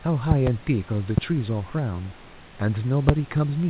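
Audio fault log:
0.31–0.49 s, loud pop: a double pop, two sharp thumps about 20 dB above the speech, most likely a voltage spike from a plug, switch, static or driver glitch, shaped into a pulse that rides on top while the speech carries on underneath.
1.18–1.20 s, loud pop: a single, shorter click about 15 dB above the speech, likely from the same kind of pulse.
3.09–3.11 s, loud pop: one more single pop, the loudest at about 25 dB over the speech.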